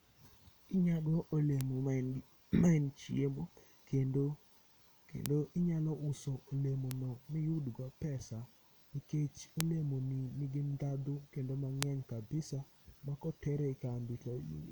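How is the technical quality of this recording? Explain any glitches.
Five isolated clicks mar the speech. These are bit error spikes: single bits flipped in memory or on a digital link, each shifting one to three samples by a power of two before they snap back. The result is a sharp, broadband tick unrelated to the speech. They fall at 1.61 s (about -14 dBFS), 5.26 s (about -8 dBFS), 6.91 s after "inyalo uso olemo" (about -14 dBFS), 9.61 s before "olemo ni nigi dhadho" (two samples, about -8 dBFS), and 11.83 s after "ni nigi dhadho kendo" (three samples, about -8 dBFS).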